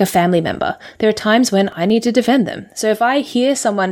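From 0.47 to 0.62 s a burble of digital noise breaks through the speech. This is DAB burbling: weak reception let bit errors, on the order of a fifth of a percent, slip past error correction, corrupting samples and scale factors so single sub-bands jump in level frame by frame.

Just after "times when", between 1.72 and 2.25 s, four sharp ticks land at a steady rhythm, each lasting a millisecond or two at most. These are CD scratch ticks: a blemish wiped out more data than correction could rebuild on each disc turn, so the player patched over the lost samples.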